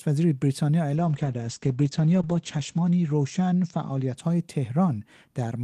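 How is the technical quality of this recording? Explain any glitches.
The recording has one noticeable glitch. A call bitrate drop runs from 0.96 to 4.65 s: the encoder got far fewer bits, which fits a fall from 32 to 11 kbps, so the speech turns rough and muffled. The high end is cut off above 8 kHz, worst for about 1.87 s.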